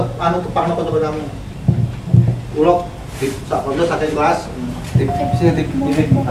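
From 4.93 s to the end, the audio picks up sample clock jitter. The converter's timing wobbles by a couple of microseconds. Samples land early or late, so fast-changing parts turn into hiss. That grainy layer sits roughly 45 dB below the signal.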